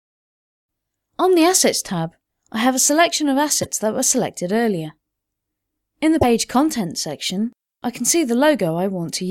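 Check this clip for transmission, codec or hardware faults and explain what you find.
Two brief glitches stand out, at 3.62 to 3.66 s and at 6.21 to 6.24 s. Each is a short chirp, noise burst or brief hole where the audio skips ahead, most likely from a broken MP3 bit reservoir: after missing frames, the next frame borrows data from bytes that now belong to another frame, garbling roughly one or two 26 ms frames.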